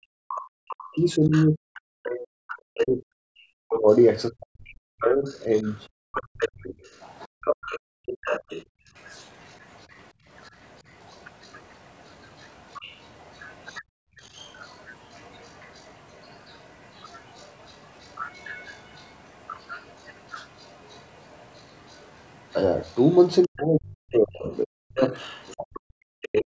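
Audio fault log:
0.00–6.78 s, speech suppressed in double talk: The echo canceller likely could not tell the near talker apart from loudspeaker echo while both sides spoke, so it turned everything down together. The talker's speech dips by as much as about 40 dB in pieces adding up to roughly four seconds.
0.28–4.05 s, other side's voice leaking through: Cancellation of the loudspeaker signal was likely incomplete, so the far voice sits only about 10 dB under the talker here. It comes through as a second voice competing with the speech.
5.02–26.42 s, other side's voice leaking through: A weaker residue of the far voice likely persists for this long stretch, around 25 dB below the talker. It is faint but present as a low background voice behind the speech.
7.27–8.93 s, 10.13–10.25 s, 13.83–14.20 s, background gated by the echo canceller: The canceller clamped the microphone hard while the loudspeaker played. 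The room sound drops out by about 40 dB for roughly 0.7 s within the first window, about 23 dB for a brief 0.1 s at 10.13 s, and about 40 dB for roughly 0.4 s at 13.83 s. Each time the ambience then snaps back as the canceller releases.
23.45–26.55 s, speech suppressed in double talk: The same confusion likely recurs at the end, with overlapping talk. The canceller ducks the near speech by up to about 40 dB across roughly two seconds through to the clip's close.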